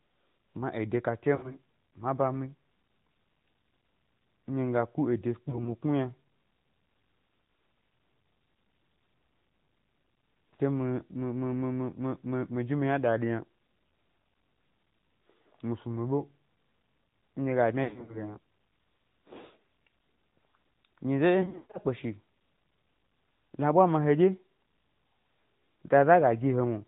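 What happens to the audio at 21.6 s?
At 21.6 s the sound falls into a burst of lost AMR speech frames, running from about 21.42 to 21.78 s. Radio errors corrupted frames, so the decoder patched each gap by replaying its last good pitch and vocal tract settings at falling gain. About 240 ms of audio is missing, scattered over 320 ms, which fits roughly a dozen 20 ms frames. The longest gap lasts about 140 ms. There the sound smears, stretches and fades toward silence before returning weak and rough. The shorter gaps come through as quick dips and warbles.

Underneath, the whole clip carries the AMR narrowband mobile codec. Its harsh, buzzy character fits a rate near 10.2 kbps. The 8 kHz sampling removes everything above 4 kHz, leaving the speech thin and muffled. A simple vocal tract model fed by a few pulses rebuilds the sound. This gives it a synthetic, buzzy edge that is plainly audible.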